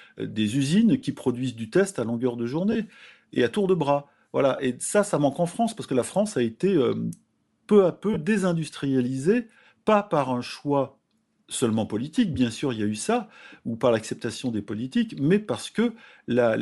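Throughout the clip the speech carries a breathy, grainy edge, with the upper spectrum thinned and partly replaced by noise. This is likely Bluetooth LC3 compression, consistent with a 48 kbps stream in 7.5 ms frames, and the damage is plainly audible.

Lost LE Audio frames occur at 2.72 to 2.76 s (30 ms, after "test à longueur de"), at 4.56 to 4.59 s (22.5 ms, after "à tour de bras"), and at 8.13 to 8.17 s (22.5 ms, before "désindustrialisée pas par un"). The decoder repeats the last spectrum with scrambled phase, so each gap is filled with a short patch of reused sound instead of a clean dropout.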